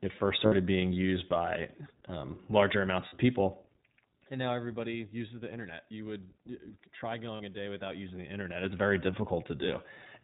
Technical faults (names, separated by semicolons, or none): iLBC codec; lost iLBC frames